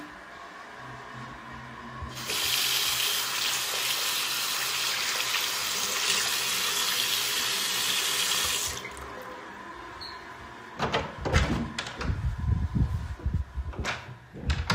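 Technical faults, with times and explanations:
No technical faults are audible anywhere in the sound.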